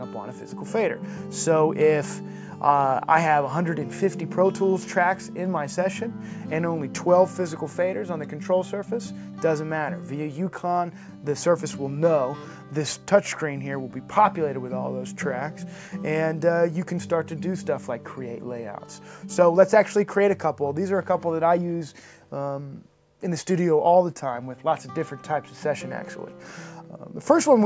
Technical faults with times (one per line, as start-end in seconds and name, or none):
none